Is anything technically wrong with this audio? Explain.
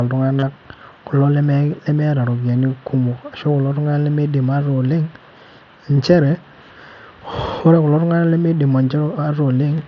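Yes. Concealed Bluetooth headset packet loss at 0.40 to 0.43 s: about 30 ms of lost packets were filled by repeating recent waveform, giving a brief buzzy held tone through the mSBC link, then a slight warble.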